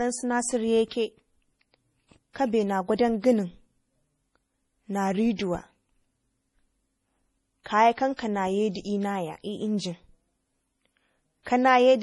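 Throughout, the speech sounds watery and swirly with nothing above 11.5 kHz, likely MP3 compression at a low bitrate near 32 kbps; unlike plain low-pass filtering, the remaining detail flickers. From 8.16 to 8.19 s, pre-echo puts a 26 ms hiss before a sharp attack as block-wide quantisation noise leaks ahead, unlike a click, which sits exactly on the onset.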